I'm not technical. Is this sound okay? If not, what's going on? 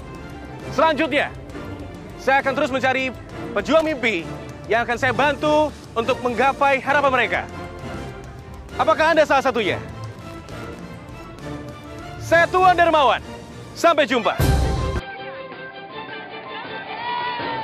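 No. A worn or dirty plug or socket made and lost contact, a loose connector crackle. Each time the connection broke, the sound was chopped into a short, rough burst of crackling and scratching, once from 3.79 to 3.87 seconds and again, longer, from 10.12 to 10.79 seconds.

From 14.99 seconds to the end, the likely cause is the input switched to a poorer device, a lower-quality microphone taking over. The sound turns dull and boxy with nothing above 5 kHz, drops a little in volume, and gains a faint new background hiss, with no gap at the change.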